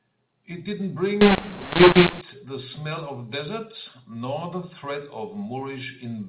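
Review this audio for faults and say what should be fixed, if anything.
From 1.21 to 2.21 s the speech turns harsh and distorted, with hiss filling the gaps. This is a mu-law and A-law mix-up: A-law samples were decoded as mu-law. To prevent it, carry the G.711 law with each stream and have the decoder follow it instead of assuming a default.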